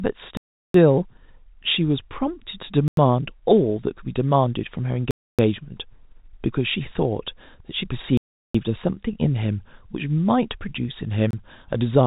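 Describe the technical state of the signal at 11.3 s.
At 11.31 to 11.33 s the speech drops into a block of digital silence about 25 ms long: the sound cuts out and back with no fade, most plausibly because the output buffer was not filled in time. It is heard as a brief hole in the G.711 telephone-band audio.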